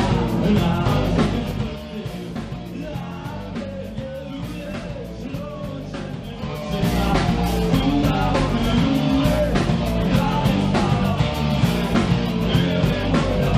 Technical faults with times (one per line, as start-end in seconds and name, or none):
1.20-1.88 zipper noise